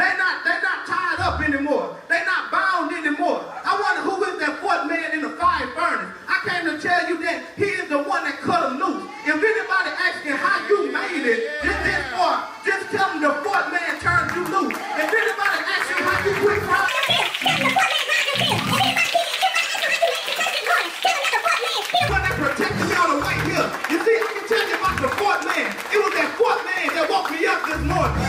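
From 16.88 to 22.09 s the audio has a section at the wrong speed, running 1.68 times fast and pitched up about ten semitones, likely from playback against a mismatched clock.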